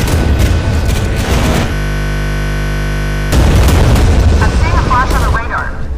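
From 1.74 s to 3.32 s the audio stops moving forward and turns into a steady, hard-edged buzz at 50 Hz, as one 20 ms slice repeats exactly, roughly eighty times over, before normal sound resumes. This is a system hang loop: the computer or its audio driver froze, and the sound hardware kept replaying the same small ring buffer it already held, so the buffer's length set the buzz's pitch.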